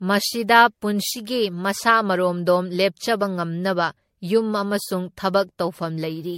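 Speech runs the whole way through with a swirly, hollow smear on every syllable, consonant attacks blurred soft, and nothing above about 16.6 kHz. That degradation is generation loss, most likely from decoding and re-encoding through a lossy codec around seven times, with the band limit fitting a 64 kbit/s MP3. Each pass re-quantised the signal on a shifted frame grid, so noise and spectral gaps piled up beyond what that bitrate alone would produce.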